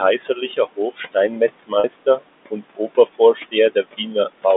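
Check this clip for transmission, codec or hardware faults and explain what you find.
There are three faults here, all on the processing and transmission side. The room noise sits about 16 dB under the speech, and the G.711 telephone band of roughly 200 Hz to 3.6 kHz is simply part of the line.

Noise suppressor artifacts run through the whole clip. The suppressor pulls the bands it judges to be steady noise down by about 20 dB, frame by frame, so the background dips between phrases and swells back under them.

Speech cut by the noise suppressor shows up three times: 0.18 to 1.41 s, 1.58 to 2.25 s and 2.97 to 3.54 s. The suppressor mistook quieter parts of the speech for noise and turned them down with the background, by up to about 19, 21 and 16 dB respectively. Soft consonants and word endings sound swallowed. Around half a second is affected in the first stretch, a fifth of a second in the second, and a shorter bit in the third.

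Packet loss with pitch repetition hits at 1.80 to 1.84 s, a 40 ms gap, which fits two lost 20 ms packets. The receiver filled it by repeating the last pitch period, so you hear a brief held, buzzy tone before the speech picks up again. It falls inside the second suppressor cut.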